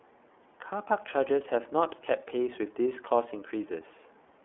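All the way through, the speech carries iLBC codec damage: a clearly rough, synthetic edge from coding each 30 ms frame on its own, nothing above 3.6 kHz, fitting its 13.33 kbps mode.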